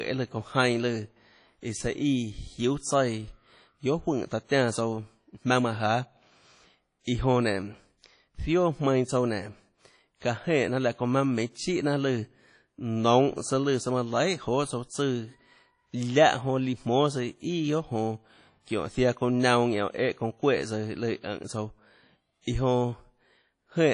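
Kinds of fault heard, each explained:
WMA compression: The speech sounds plainly processed, with a ringing, washy quality and a hiss that swells and fades with the signal, and nothing above 10.1 kHz, which dulls the top end. The likely cause is a low-bitrate transform codec such as WMA, with the damage fitting roughly 32 kbps. Long transform blocks smear quantisation noise over tens of milliseconds around each sound, while quieter spectral detail is discarded outright.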